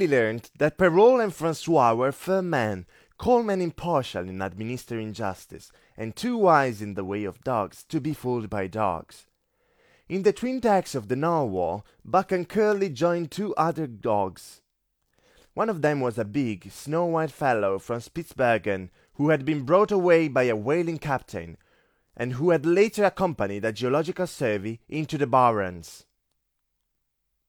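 No technical faults can be heard anywhere in the recording, from beginning to end.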